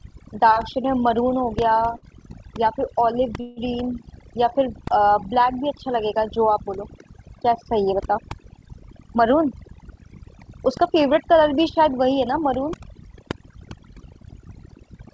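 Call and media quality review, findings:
Overdone noise removal, whole clip: background pulled down and broken up into twinkling specks. Noise suppressor set too aggressive, zeroing individual frequency bands near its noise estimate and dropping low-level speech detail with them.

Short stall from a late packet, 1.97 to 2.05 s: sound held about 55 ms too long, slight buzz or dip. Jitter buffer underrun; receiver stretched the last audio until the packet arrived, resumed in place, nothing lost, delay up 55 ms.

Call audio freeze, 3.40 to 3.60 s: 162 ms of extended buzz or hiss fill fading out, no full silence, then resumption from the same point with nothing dropped. Likely a jitter buffer underrun from delayed packets, concealment covering the gap and adding 162 ms of latency.

Jitter buffer speed-up, 9.04 to 11.85 s: speech runs about 5% fast at unchanged pitch, sounds hurried. Receiver trimming the excess buffered delay by cutting short pitch-period segments repeatedly, around 150 ms in total. 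Band limit near 8 kHz across the clip fits the G.722 call codec.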